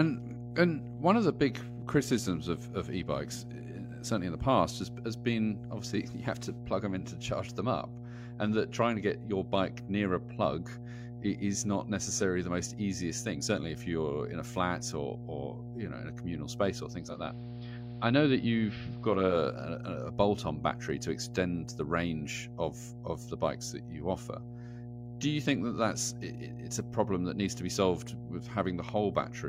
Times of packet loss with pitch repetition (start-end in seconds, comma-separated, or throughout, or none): none